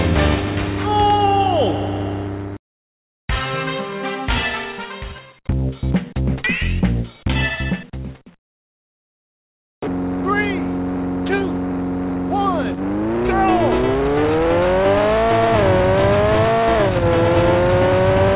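No technical faults are present.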